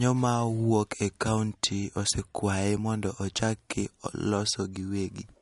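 An encoder starved of bits, likely from MP3 compression at a low rate around 48 kbps, runs throughout the speech, cutting everything above 11.2 kHz and dropping weak frequency lines frame to frame, so sibilants turn watery and swirly and consonant attacks smear.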